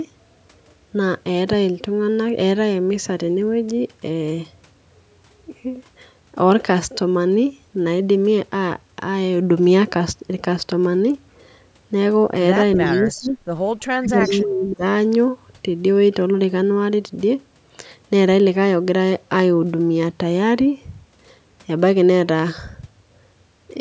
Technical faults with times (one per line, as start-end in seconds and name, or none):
12.75-13.30 echo leak
12.76-13.38 speech suppressed in double talk
13.79-13.83 echo leak
13.85-14.84 speech suppressed in double talk
14.21-14.34 echo leak